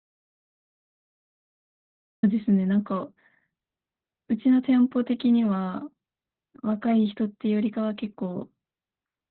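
From the very start until 2.23 s the sound is an audio dropout to silence, already under way when the clip opens. The gap is silent, with no hiss or room tone, which sets it apart from a quiet passage or a noise gate. The likely cause is the input being lost while recording continued.

Once the sound arrives, and throughout, it carries heavy Opus voice compression in SILK mode. Nothing is present above about 4.2 kHz, so the speech is muffled, hoarse and slightly robotic, which fits a narrowband setting near 8 kbps. Its hoarse, robotic texture distinguishes it from a simple low-pass filter.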